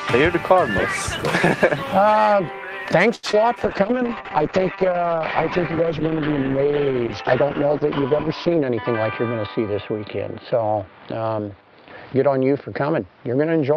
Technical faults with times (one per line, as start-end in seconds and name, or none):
3.15-3.25 short stall from a late packet
3.31-3.35 short concealed packet loss
3.64-13.76 call bitrate drop